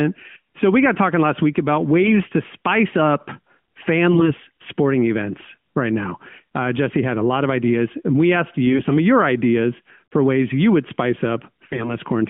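AMR bit errors strike at 4.12 to 4.34 s, just before "sporting events right now"; at 8.67 to 8.95 s, between "ideas and we asked" and "of your ideas for"; and at 11.66 to 11.96 s, after "ways you would spice". In each case, a few percent of the weakly protected bits in the narrowband frames flip. The corrupted pulse, gain and spectrum values make the speech hoarse, scratchy and gargly while it roughly holds its pitch and level.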